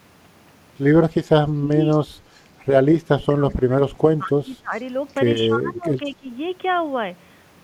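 It's a speech clip with two echo-canceller problems. Speech suppressed in double talk hits from 1.44 to 1.78 s, 2.93 to 4.73 s and 5.48 to 6.29 s. The voice ducks by up to about 25 dB (about 20 dB in the last stretch) and breaks up, likely because the canceller confused it with far-end echo while both sides talked. There's also echo leak, faint scraps of the voice coming back 205 ms late, roughly 30 to 40 dB down, at 1.91 to 1.97, 4.74 to 4.81, 5.75 to 5.82 and 6.06 to 6.10 s. That's likely residual loudspeaker pickup the canceller didn't remove. Quiet room noise sits about 35 dB under the speech.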